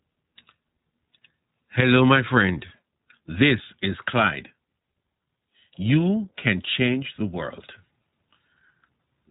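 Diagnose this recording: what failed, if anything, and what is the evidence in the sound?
The speech passed through the iLBC codec at the codec stage, and the damage is plainly audible from start to finish. The band stops at 3.8 kHz, so sibilants and breath lose their top and the voice sounds boxed-in and telephone-like. The excitation in each short frame is rebuilt on its own, which leaves a slightly rough, synthetic grain. That pattern fits a 20 ms frame mode running at about 15.2 kbps.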